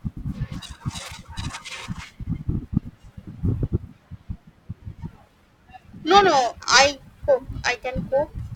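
Periodic clock jitter runs through the whole speech clip: the converter clock wobbles at around 1 kHz, adding sidebands that give a rough, metallic edge, gone in pauses.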